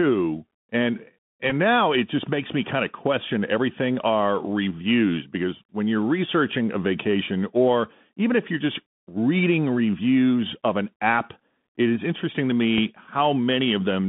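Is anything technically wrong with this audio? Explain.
Yes. Throughout, the Bluetooth CVSD headset codec limits the speech to roughly 150 Hz to 3.6 kHz. Its one-bit adaptive steps, consistent with 64 kbps, leave scratchy sibilants and granular hiss.

Bluetooth headset packet repeats occur at 1.5 s and 12.78 s, where lost packets were replaced by replaying earlier ones. The first spans about 11 ms, fitting three 3.75 ms slots, and gives a brief buzzy tick. The second is a single small tick.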